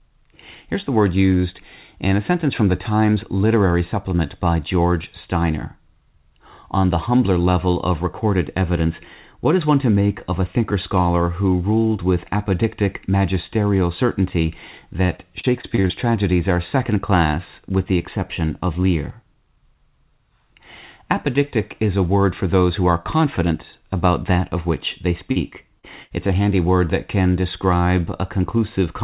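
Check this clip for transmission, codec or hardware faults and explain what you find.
Three kinds of packet-loss damage occur in this speech, all in the second half, heard through a narrowband call path with nothing above 4 kHz, which fits G.711 mu-law at 64 kbps.

Repeated packet loss (robotic sound) runs from 15.06 to 15.92 s, between "with apodictic magisterial certainty" and "tragedies are second class". Seven separate gaps, none longer than 35 ms and about 160 ms missing in total, were each patched by extending the preceding sound. Concealment covers about 18% of the span, so the stretch turns choppy. What sets it apart from isolated losses is the rapid recurrence, which gives a continuous choppy texture instead of a single blemish.

Short concealed packet loss occurs twice: at 25.32 to 25.38 s, right after "that of which they", and at 25.80 to 25.85 s. About 40 ms went missing each time. 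The receiver bridged each hole by continuing the last sound, from its pitch where voiced and as shaped noise where not, then blended back. Each is heard as a brief smear or wobble. Unlike the robotic stretch, these are isolated events.

A burst of packet loss follows at 26.03 to 26.12 s, where about 80 ms disappeared in one run and roughly 74 ms was filled in. The last sound is stretched and fades as the gap goes on, giving a held buzz or dying hiss before speech resumes a little further on, with the section in between gone. Its single longer gap and audible fade separate it from the quick smears of the short losses just before it.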